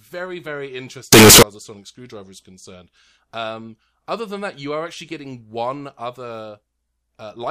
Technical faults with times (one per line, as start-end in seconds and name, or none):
1.13-1.43 signed and unsigned mixed up